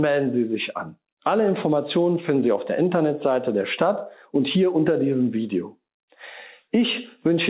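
Nothing technically wrong can be heard in the audio, which comes through a call path whose G.711 mu-law coding limits it to the telephone band with nothing above 4 kHz.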